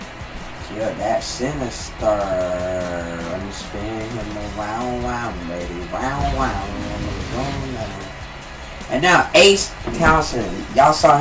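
Nothing stood out on listening, and the sound stops at about 8 kHz, which fits a wideband call path such as G.722 at 64 kbps.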